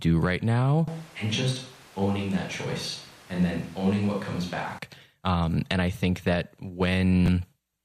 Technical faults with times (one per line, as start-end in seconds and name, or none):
0.88-4.79 switch to a distant microphone
6.31-6.41 DAB burbling
7.26-7.28 chunks out of order